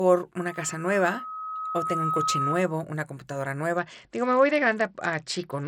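A speech clip with two faults. Loudspeaker feedback squeal runs from 0.36 to 2.81 s. A tone at 1.3 kHz swells over about two seconds until it matches the speech level. The microphone is hearing its own loudspeaker, and at that frequency the loop gain passes one. From 3.77 s to the end, the sound turns dull and gritty. The treble fades and coarse noise rises. This is a Bluetooth SBC bit pool drop, likely from a congested link forcing a lower rate, around 72 kbps. The upper sub-bands are starved of bits.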